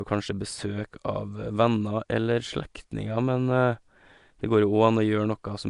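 From start to finish the speech carries a rough, hissy halo and a smeared, underwater feel, with nothing above 10.6 kHz. That's likely Nellymoser compression, the old Flash mic codec, where quiet bands get filled with noise. The damage is plainly audible, which fits roughly 44 kbps.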